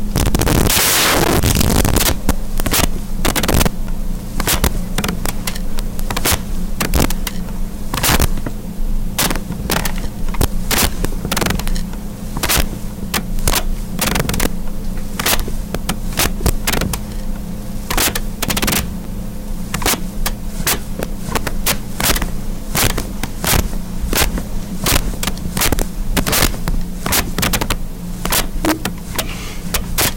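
Throughout this recording of everyday sound, loud moments break into a tearing buzz that is much sharper than clipping. This is integer overflow: the level is pushed about 21 dB past the limit, so around 7 percent of samples wrap to the opposite sign instead of being held. Brief ticks or dips at 3.87 s and 19.04 s are blocks of digital silence, one about 11 ms long, which fits a 512-sample buffer, and one about 7.5 ms. The sound cuts out and returns with no fade, either because the output buffer wasn't filled in time or because a calculation produced invalid numbers.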